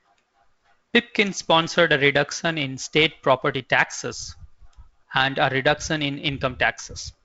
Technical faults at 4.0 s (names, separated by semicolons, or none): none